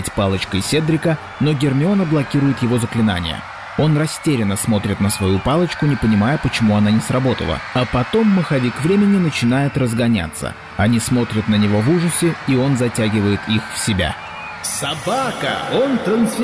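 No dropouts, glitches, distortion or level faults are audible anywhere in the recording.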